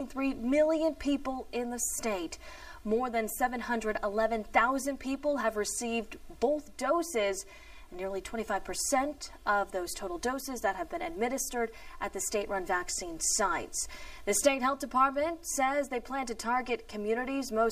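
One channel runs about 3 ms late and the two are summed to mono, a channel delay (comb filtering) present throughout. Shared content cancels at evenly spaced frequencies from roughly 150 Hz upward, so the audio sounds hollow and phasey.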